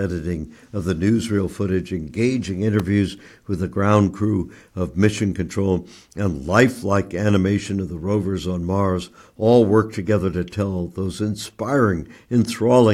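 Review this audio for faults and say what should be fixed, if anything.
At 2.80 s, right after "the newsreel footage engaging", a sharp snap cuts across the speech: an electrical switching spike lasting only a few milliseconds and peaking around -15 dBFS. The likely cause is a nearby switch, motor or static discharge arcing and coupling into the audio line. On the waveform it shows as a narrow vertical spike standing out from the speech envelope; on a spectrogram, a thin full-height vertical line spanning low frequencies to well above 10 kHz. Removing it with a spectral de-click or a short interpolation repair is straightforward. To prevent it, keep audio cables away from switched mains loads and motors, and use balanced, properly grounded lines.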